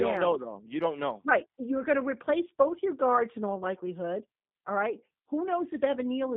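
From start to finish, the speech carries G.729 codec damage. Nothing passes above 3.7 kHz or below 150 Hz. The decoder rebuilds each frame from a vocal tract filter, pitch prediction and a few pulses, which fits 8 kbit/s. Speech sounds plainly rough and synthetic.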